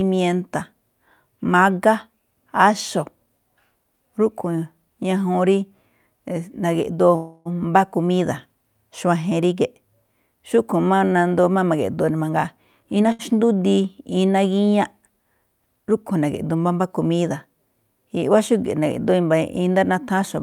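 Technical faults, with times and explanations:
7.15–7.48 s, call audio freeze: the last sound is drawn out for about 0.3 s as a fading buzz or hiss, then the speech resumes exactly where it stopped with nothing lost. This is likely packets held up in transit while the jitter buffer ran dry. It is longer and decays more than a brief stall.
12.29–13.08 s, jitter buffer speed-up: the speech runs at about 119% speed while keeping its pitch, because the receiver trims short pitch-period slices, about 150 ms in all, to shed surplus buffered delay. It sounds hurried rather than chipmunk-like, which separates it from a resampling error.
13.12–13.22 s, short stall from a late packet: one sound is held about 70 ms too long with a slight buzz or dip before the speech continues from the same point, nothing missing. It is a brief stretch filling a single late packet, much shorter than the fading freeze earlier.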